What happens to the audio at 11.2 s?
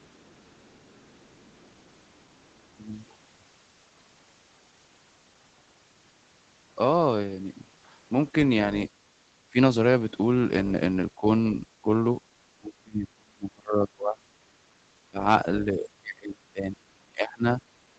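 Speech suppressed in double talk occurs from 11.16 to 11.26 s, where the speech briefly dips by about 10 dB. It is likely an echo canceller that, with both sides talking at once, mistook this talker for loudspeaker echo and turned both down.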